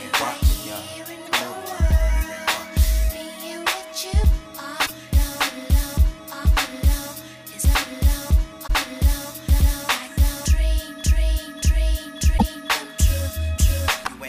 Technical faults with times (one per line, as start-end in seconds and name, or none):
1.25-1.29 damaged data in a compressed stream
4.82-4.90 damaged data in a compressed stream
8.63-8.70 damaged data in a compressed stream
12.34-12.43 damaged data in a compressed stream